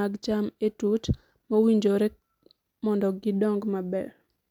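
No technical faults can be heard anywhere in the speech recording.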